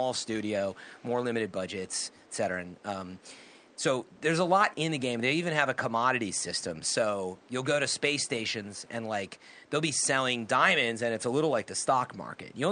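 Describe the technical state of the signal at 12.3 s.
At 12.3 s the speech is intact, with only the room's own background noise sitting about 29 dB below it.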